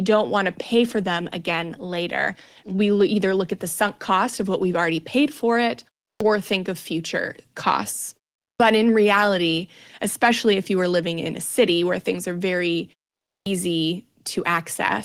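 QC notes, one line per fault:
6.11 s, 8.51 s, 13.37 s: clipped start after a pause. After short pauses of 0.3, 0.4 and 0.5 s, the first 95, 88 and 93 ms of speech are lost, so each phrase starts abruptly without its onset. The output device goes idle during the silence and needs that time to wake before sound passes again.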